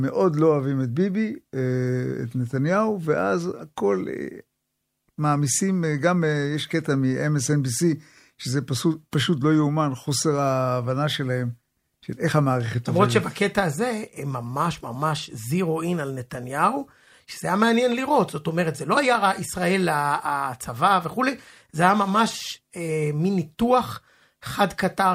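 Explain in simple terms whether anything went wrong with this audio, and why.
Listening through the recording, nothing stood out as having gone wrong with the sound.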